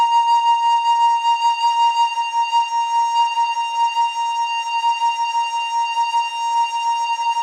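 No technical faults can be heard in this music.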